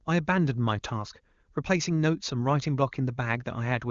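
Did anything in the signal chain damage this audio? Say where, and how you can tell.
No, nothing in the chain has hurt this speech; it went through an HD Voice (AMR-WB) codec whose sound points to the top rate of about 23.85 kbit/s, where any coding damage stays faint at most.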